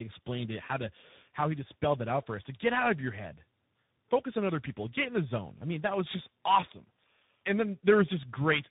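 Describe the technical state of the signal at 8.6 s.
Tandem speech coding affects the whole clip, including 8.6 s. The speech sounds like it passed through three speech coders in a row, each re-encoding the previous one's degraded output, which makes it rough, muffled and warbly. A spectrogram would show an empty band above 3.8 kHz and smeared, unsteady harmonics.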